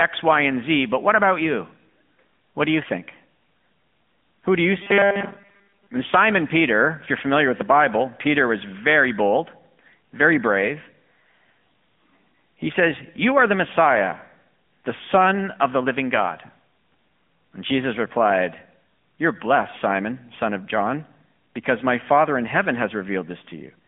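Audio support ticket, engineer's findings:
AMR narrowband mobile codec across the whole call. Line band about 200 Hz to 3.5 kHz, nothing above 3.7 kHz. Buzzy, synthetic texture plainly audible, fitting a 10.2 kbps mode. Pulse-driven vocal-tract model discards fine detail and all upper band.

Robotic sound from repeated short buffers, 4.82 to 5.88 s, just after "do you". Rigid metallic buzz at 200 Hz. Likely cause: buffer underrun, with the player looping the last 5 ms, so most of the real audio is skipped there.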